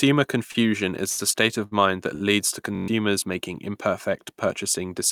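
Four times in the first two and a half seconds, a sound hangs on a beat too long, with a faint buzzy smear as it stretches. This is a short stall from a late packet, at 0.51 to 0.70 s (held about 31 ms), 1.09 to 1.20 s (81 ms, just before "a state of mind"), 1.66 to 1.73 s (58 ms, between "a state of" and "mind that leads to"), and 2.15 to 2.24 s (54 ms, between "state of mind that" and "leads to"). Each time the jitter buffer ran dry, so the receiver held the last sound until the packet turned up, then picked up where it left off. Nothing is lost, but the delay grows by the length of each hold.

From 2.75 to 2.88 s a coarse, steady buzz at about 47 Hz replaces the audio. This is a system hang loop. The machine froze while the audio hardware kept replaying one 21.33 ms slice six times over, which fits a 1024-sample ring buffer. Roughly 150 ms of real audio is lost there.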